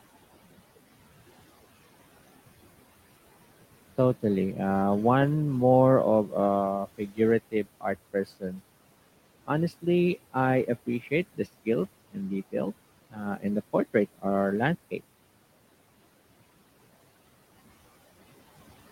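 Noise suppressor artifacts run through the whole clip. The suppressor estimates the steady room noise, which sits about 20 dB below the speech, and turns down every band it attributes to that noise by about 16 dB, frame by frame. The background drops away in the pauses and comes back up under each phrase.

Speech cut by the noise suppressor occurs at 6.86 to 7.2 s, 7.51 to 7.96 s, 8.13 to 8.61 s and 13.1 to 13.2 s. At these points the suppressor mistakes quiet parts of the speech for noise and pulls them down with the background, by about 18, 17, 16 and 16 dB at the deepest. Only a fraction of a second is affected each time, and the affected speech there sounds swallowed or faint.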